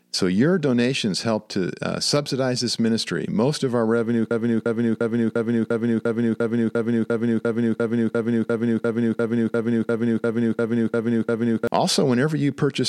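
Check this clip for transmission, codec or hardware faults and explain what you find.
There's one fault, a broken-record loop. Right after "of our revenue", at 4.31 s, a 0.35 s slice of speech repeats back to back 21 times until 11.67 s. The stream likely stalled and kept replaying its last held chunk, so the speech that should have followed is lost.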